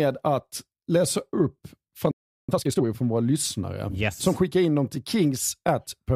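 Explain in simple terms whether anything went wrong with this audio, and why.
At 2.11 s the speech simply stops, and silence holds for about 0.37 s until 2.49 s. This is a playback stall. The likely cause is that the player ran short of incoming audio, or was briefly held up, and had nothing to send out. Unlike a tiny dropout, which is a click-short gap, this pause is long enough to notice as a clear hitch. The speech then resumes.

From 2.49 s to 2.85 s, just before "från våra lyssnare yes", the speech rushes along at double speed while the pitch stays normal. This is time-compressed catch-up. To make up for the pause, the player snips out small slices of audio and blends the joins together. A plain speed-up would raise the pitch and make the speech sound squeaky. Here the pitch stays the same and only the pace hurries.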